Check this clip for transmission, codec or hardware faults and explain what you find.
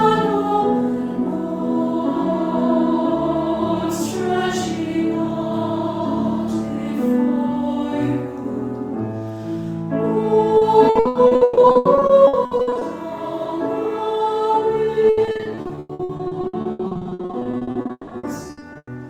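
Two stretches of repeated packet loss (robotic sound), 10.57–12.83 s and 15.09–18.89 s: frequent lost packets, each patched by extending prior audio, leave nearly half concealed, giving choppy sound with gaps up to 160 ms.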